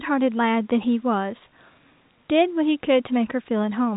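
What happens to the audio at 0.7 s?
At 0.7 s the speech continues intact, with only the narrow band of the telephone coding, which passes nothing above about 3.8 kHz.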